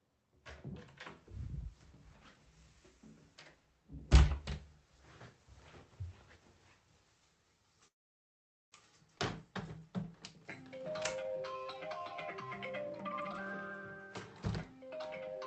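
At 7.87 s the call audio freeze begins: packets were likely held up in transit and the jitter buffer ran dry. The receiver filled about 0.84 s, almost all of it silence, then resumed at 8.74 s exactly where it had stopped, so nothing is lost and the sound is simply pushed later.

From 9.18 to 9.21 s comes a skip ahead. Audio that was already queued behind a dropped stretch plays immediately, so about 0.4 s is missing. The two sides are joined with only a tiny fill, and the sound jumps forward abruptly.

Between 10.78 and 12.04 s a jitter buffer slow-down runs. The buffer needed more reserve, so the receiver repeated small pieces of sound again and again, adding 113 ms. Playback runs at 92% speed at unchanged pitch, and sounds are stretched out.

Two jitter buffer speed-ups follow as the buffer sheds excess delay by cutting short pieces repeatedly. From 12.90 to 13.47 s the sound races at 188% speed with about half a second removed. 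From 14.57 to 15.36 s the trimming is milder: 107% speed, about 70 ms gone, and the pacing is slightly hurried.

All of this passes through an Opus call path whose 8 kHz bandwidth limits the top end, at a rate that points to a bitrate near 40 kbps.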